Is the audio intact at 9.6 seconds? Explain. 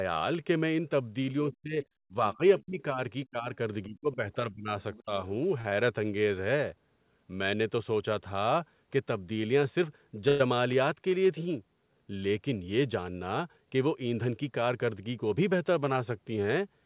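Yes, the speech at 9.6 seconds is intact, with no dropout, glitch or other fault at that moment, only the normal narrowband sound of the call path, which leaves nothing above 4 kHz.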